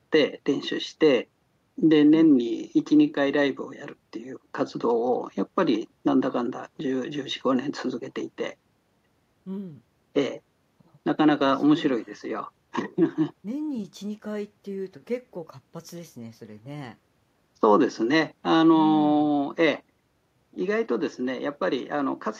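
No technical faults can be heard anywhere in this speech recording. There is nothing to place on a timeline.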